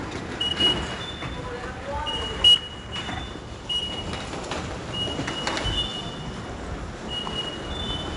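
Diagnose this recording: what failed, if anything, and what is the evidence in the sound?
4-bit ADPCM compression throughout, a codec fault. Each sample is coded as a coarse predicted step, leaving gritty, level-following hiss on loud sound, and nothing above 10.7 kHz, which fits a low-rate ADPCM stream.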